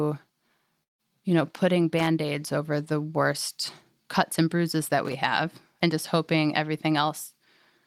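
The clip is speech with two kinds of fault. At 0.83 s the sound breaks off until 1.01 s. The last sound is stretched into a fading buzz, and then silence takes over. About 0.16 s of the audio never returns. When the speech resumes, it simply jumps ahead. This is likely a long network dropout, where packets stopped arriving and the receiver concealed the gap. Twice there is loose connector crackle: from 1.99 to 2.07 s, and from 5.05 to 5.13 s. Each burst is a short, irregular scratching. A worn or dirty contact is making and breaking as it shifts. That chops the signal into rapid fragments, and the jumps in level come through as clicks and pops.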